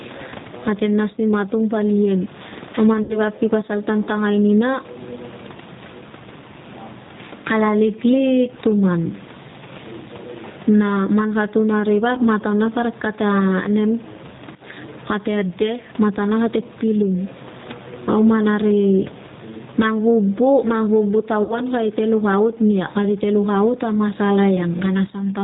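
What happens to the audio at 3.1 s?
VoIP packet loss concealed by the speech codec occurs from 3.03 to 3.19 s. About 60 ms of audio went missing, so the decoder stretched its last pitch and filter into a fading buzzy tone or coloured noise. The voice stays weak or distorted for a moment after packets return, into "vap ki pasal tan".

G.729 codec damage is also present at this moment. The speech is rebuilt from a vocal tract model at 8 kbit/s, so nothing above 4 kHz survives and it sounds rough and synthetic.

Gain pumping affects this moment too. The gain swings by roughly 15 dB, pulled down under loud sounds, likely because a fast limiter is reacting to gain set far too high.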